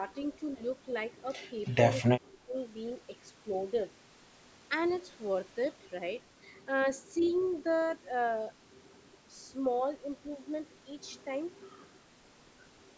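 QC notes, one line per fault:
1.65–1.75 s and 7.2–7.47 s, echo leak: faint delayed copies trailing the speech by about 290 ms, around 35 dB then 25 dB down, likely from a speakerphone's echo canceller letting some pickup slip back.
2.11–2.55 s, speech suppressed in double talk: the talker dips by as much as about 25 dB in patches totalling around 0.3 s, likely the canceller ducking everything while both sides overlapped.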